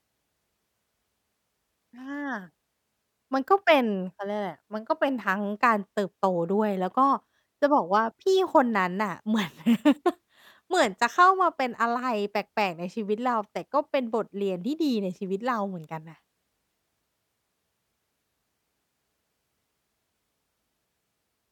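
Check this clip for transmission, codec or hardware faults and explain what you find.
The speech signal stays steady and continuous throughout, with no audible technical fault at any point.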